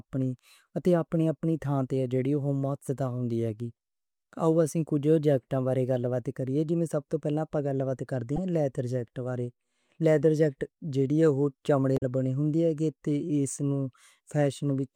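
Damaged data in a compressed speech stream causes a brief glitch at 8.36–8.38 s, after "آپا گَل بات کرتے", and again at 11.94–12.03 s, before "بنی ہوندی اے تے". At each point the decoder misreads corrupt frames and loses sync, leaving a sudden, jagged waveform discontinuity.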